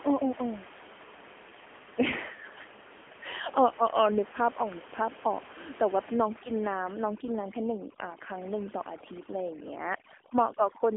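Throughout the speech, the AMR narrowband mobile codec is plainly audible: nothing passes above 3.6 kHz, and the low-bit-rate vocal-tract model makes the voice buzzy and synthetic, which fits a bitrate around 8 kbps. That buzz separates it from simple telephone band-limiting, while the room noise, about 18 dB below the speech, takes on a swirling warble.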